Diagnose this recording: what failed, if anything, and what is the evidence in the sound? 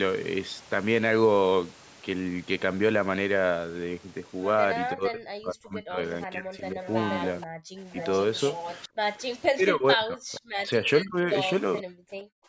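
Speech suppressed in double talk, at the call-processing stage: the speech dips by up to about 40 dB from 4.93 to 6.8 s, 7.59 to 7.95 s, 9.49 to 11.3 s and 11.82 to 11.88 s. The likely cause is an echo canceller ducking the near talker while the far side speaks. On a spectrogram these spans appear as broken, faded energy columns, and the waveform envelope collapses in pieces.

Echo leak, also at the call stage: a fainter copy of the speech trails the original by 476 ms at 6.82 to 7.46 s, 7.99 to 8.88 s and 11.78 to 11.82 s, sitting about 10 to 20 dB below the direct sound. This is likely loudspeaker pickup that the canceller failed to remove. A spectrogram shows ghost harmonics offset by roughly half a second.

Background gated by the echo canceller: from 12.22 s to the end, the room sound drops by about 40 dB for roughly 0.3 s. The canceller clamped the microphone hard while the loudspeaker played. 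The waveform shows the noise floor flattening almost to silence, and the spectrogram goes dark across the band.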